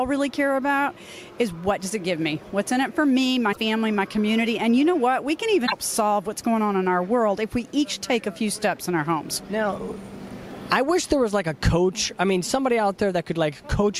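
At 3.52 s and again at 5.66 s the sound skips forward and breaks into a brief chirp, noise burst or short hole lasting about 60 to 70 ms, roughly two or three 26.1 ms frames. The likely cause is a broken MP3 bit reservoir: after missing frames, the following frames draw their borrowed data from the wrong bytes.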